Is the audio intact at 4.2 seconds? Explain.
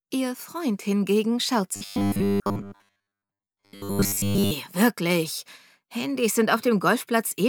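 No: 4.2 s falls inside robotic sound from repeated short buffers (1.76 to 4.52 s), likely from repeating 10 ms blocks. This forces a rigid 100 Hz metallic buzz, visible as stacked 100 Hz harmonics and a repeating waveform.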